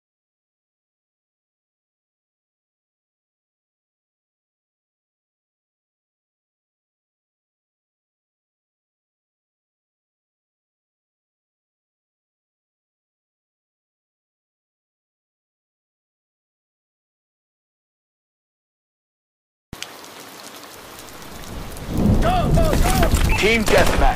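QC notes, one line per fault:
22.53–22.59 s, damaged data in a compressed stream: corrupt frames break decoder sync, giving a short glitch; the spectrogram shows a brief broadband smear and the waveform a jump.
23.07–23.36 s, processor overload crackle: about ten late buffers of roughly 5 ms are skipped, leaving hard-edged gaps, seen as clustered waveform discontinuities and thin vertical spectrogram lines.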